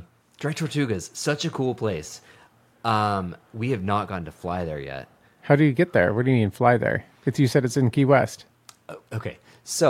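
No technical faults can be heard in this recording.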